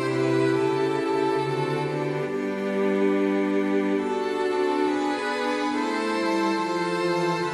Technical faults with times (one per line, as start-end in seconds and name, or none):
none